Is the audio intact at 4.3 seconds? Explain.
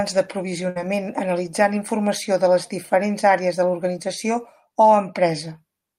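Yes, at 4.3 seconds the speech plays through cleanly, with no dropout, click, distortion or other audible fault at that moment.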